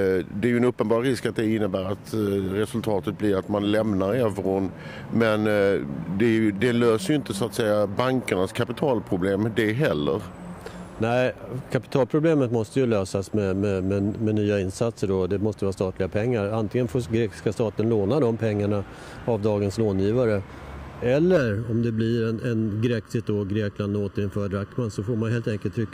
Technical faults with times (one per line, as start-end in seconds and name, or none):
11.38 block of digital silence
21.37-25.93 channel delay (comb filtering)